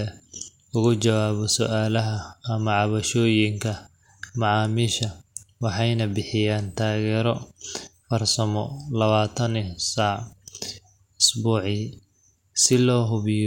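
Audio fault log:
No faults heard in this recording.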